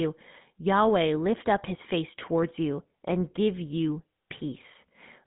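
The speech passes through a GSM full-rate codec throughout. Pulse-excited vocal-tract modelling leaves an obvious buzzy roughness, and nothing gets through above 3.8 kHz.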